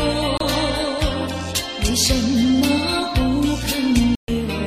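Bluetooth dropouts break the audio twice, at 0.38 to 0.41 s and at 4.15 to 4.28 s. The first leaves a hole of about 29 ms and the second about 131 ms, and each hole is silent. When the sound comes back it has skipped ahead rather than paused. The likely cause is wireless packets arriving too late at the headphones and being discarded, with the gap lengths fitting a loss of two packets and then about nine.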